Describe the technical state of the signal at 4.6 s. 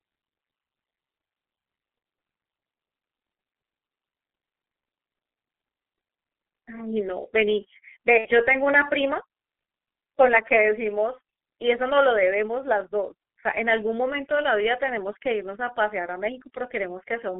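At 4.6 s the speech sounds muffled and hoarse, with smeared consonants and nothing below about 250 Hz or above 3.4 kHz. This is heavy G.723.1 codec damage running through the whole clip; its 30 ms frames update the voice model slowly, and the coarseness fits roughly 6.3 kbit/s.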